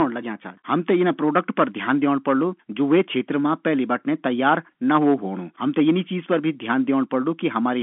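No technical faults are audible.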